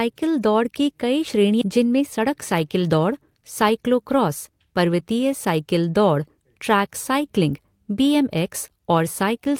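At 1.61 s there's a skip ahead: roughly 0.7 s of the speech just isn't there, and playback jumps straight to later audio with no fill and almost no gap. A chunk was dropped, either in transit or by an overflowing jitter buffer, while newer audio was already queued. You hear it as an abrupt splice where the two sides butt right up against each other, and the delay drops by about that same 0.7 s.

Right after that come two stretches of jitter buffer speed-up, from 1.77 to 2.99 s and again from 3.62 to 5.20 s. The buffer was holding more than it wanted to, so the receiver trimmed it down by cutting lots of tiny pieces, one or a few pitch periods each. That adds up to about a tenth of a second per stretch. The speech runs about 7% and then 6% faster with the pitch unchanged, so it comes across as slightly rushed rather than chipmunky.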